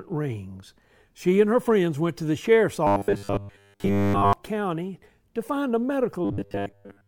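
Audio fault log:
2.87 to 4.33 s and 6.25 s to the end: robotic sound from repeated short buffers. The speech becomes a rigid, metallic drone pinned at 100 Hz that still loosely tracks the syllables, with most of the real audio missing. The likely cause is late-arriving audio being covered by looping the last 10 ms block. Unlike dropouts or codec warble, the pitch stays locked rather than going silent or smearing.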